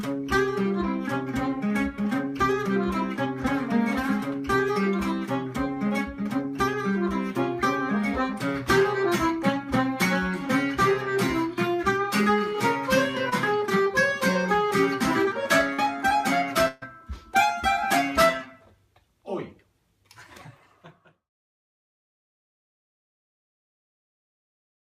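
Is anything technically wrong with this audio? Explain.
Yes, there are two kinds of packet-loss fault.

Short concealed packet loss occurs at 13.29 to 13.34 s, where about 22 ms was synthesised to cover 20 ms of lost audio, and at 15.74 to 15.80 s, where 43 ms covered 40 ms. The decoder extended the preceding sound, either from its pitch or as shaped noise, then crossfaded back into real audio. Each heals as a brief smear or wobble. On a spectrogram, the pattern before each gap is copied forward and briefly goes flat and smooth before the true detail returns.

A burst of packet loss at 16.68 to 16.84 s is longer. The receiver filled 136 ms while 140 ms of real audio went missing, with no silent stretch. It kept the last sound going and lowered it as the gap continued, producing either a held buzz or a fading hiss. Playback then resumes slightly further on. In the waveform, the envelope tapers through the fill and then jumps to the returning audio. 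A spectrogram shows a frozen, repeating texture dimming before an abrupt resumption.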